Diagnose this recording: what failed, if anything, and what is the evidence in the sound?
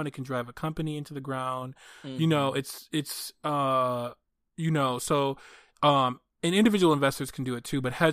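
Nothing failed: no stage shows any fault here.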